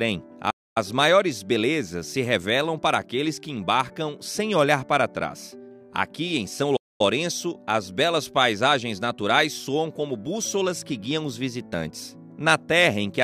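Playback stalls, likely from the player running dry of data or its thread being blocked, silence the audio mid-flow at 0.5 s and 6.76 s for about a quarter-second each before it resumes.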